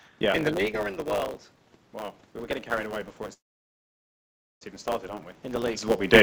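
Throughout, a block size mismatch (truncated) discards each block's tail, giving a 100 Hz buzz and speech running 1.07 times fast with its timbre intact, which fits 512-sample blocks. A spectrogram shows evenly spaced vertical lines every 10 ms.

From 1.91 s, just after "or in the world", the input drops by about 13 dB and the automatic gain rises to compensate. Voice and room noise swell together, and the waveform envelope climbs gradually to the end.

From 3.33 s to 4.63 s, a call audio freeze appears, likely from delayed packets emptying the jitter buffer. The last sound trails off into about 1.34 s of silence, a flat waveform and blank spectrogram, before speech resumes with nothing lost.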